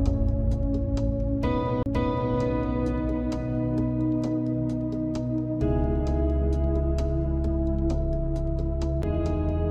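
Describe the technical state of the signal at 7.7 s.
At 7.7 s the signal is intact, with no dropout, clipping, distortion or other fault to be heard.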